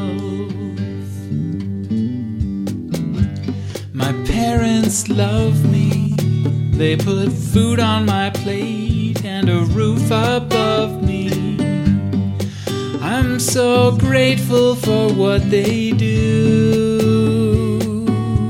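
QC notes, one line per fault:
4.94–6.50 s, GSM phone buzz: a hard, raspy buzz at about 217 Hz, thick with harmonics and unrelated to the sound, sitting about 25 dB below it for 1.56 s. A nearby 2G phone bursting data makes the audio circuit rectify its radio pulses.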